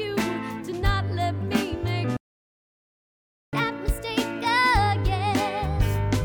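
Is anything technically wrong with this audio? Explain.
Yes, there are two related faults.

From 2.17 s to 3.53 s there is a playback stall. The sound cuts off mid-flow and stays silent for about 1.36 s, likely because the player ran out of data or was blocked. The waveform shows a flat line, and the spectrogram shows a blank vertical band.

From 3.53 s to the end comes catch-up at higher speed. The player works through its backlog at 1.15 times normal speed by resampling, so the audio sounds hurried and roughly two semitones sharp. On a spectrogram, harmonics sit higher and events are compressed in time.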